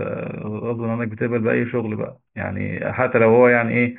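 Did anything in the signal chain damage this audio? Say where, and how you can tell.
No, nothing along the chain seems to have touched this speech; there's no point where any stage leaves a mark you can hear.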